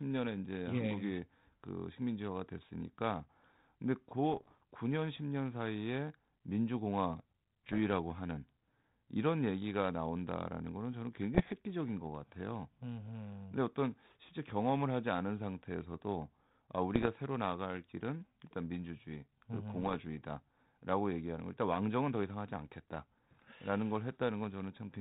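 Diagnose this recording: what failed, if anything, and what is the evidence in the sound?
Pops and rough, gritty bursts with brief level jumps at 4.30–4.63, 7.66–7.79, 11.34–11.53, 16.95–17.09 and 19.82–20.05 s point to bit errors on an ADPCM link, roughly 0.7 to 1% of bits flipped in transmission, each upsetting the decoder's step size and predictor so the damage rings on.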